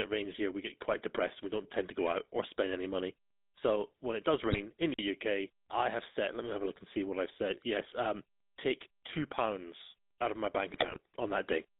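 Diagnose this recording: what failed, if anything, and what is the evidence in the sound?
The codec stage is at fault throughout. The speech went through the GSM full-rate codec, and the buzzy, gravelly texture fits its roughly 13 kbps pulse-excited coding. The band runs only from 200 Hz to 3.7 kHz, so the sound is thin, rough and plainly degraded from start to finish.

The network link corrupted the bitstream in two places, producing GSM bit errors. The decoder received wrong filter, pitch or gain values, which warped the spectrum and level. A brief squawk and gargle appears at 4.50 to 4.59 s, just after "when it does". A longer burst runs from 10.70 to 11.00 s, right after "out of my bank".

The storage or playback stage left a gap between chunks. The audio was handled in 5-second blocks, and silence was inserted at each join. 50 ms holes appear at 4.94 s and at 9.99 s, the second between "um take two pounds" and "out of my bank". 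No speech is missing, but the flow breaks at each join.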